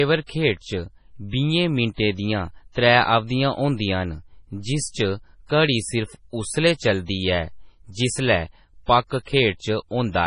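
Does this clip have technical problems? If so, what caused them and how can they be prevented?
Yes, the whole speech clip has a watery, swirly quality, and there's nothing at all above 10.6 kHz, so the top end just stops dead. That points to heavy MP3 compression, likely at a very low bitrate, which fits something around 24 kbps. Starved of bits, the encoder chops off the treble at a fixed point and drops quieter frequency detail that flickers in and out frame by frame, which is where the swirl and smeared consonants come from. To prevent it, keep a lossless master and encode at a much higher bitrate, or use a more efficient codec when bandwidth is tight.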